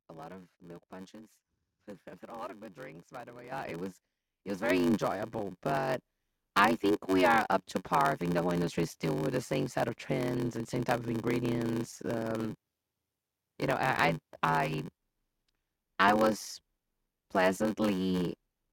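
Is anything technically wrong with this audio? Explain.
Yes. There are two faults.

A block size mismatch (padded) runs throughout. Each block is read longer than it was written, and the gap is filled with zeros. That produces a 93.8 Hz buzz, which fits a 512-sample read block. The speech plays at 0.861 times its normal speed, yet keeps roughly normal pitch.

The microphone volume is stepped up twice. At 3.52 s the level jumps by about 9 dB. At 4.70 s it jumps again by about 5 dB. Each step is abrupt. The voice and the background rise together at once.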